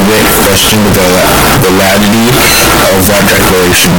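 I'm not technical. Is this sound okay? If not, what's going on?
No. The recording was likely saved in one number format and played back as another, a float read as integer fault, making the speech blaring, harsh and buzzy throughout.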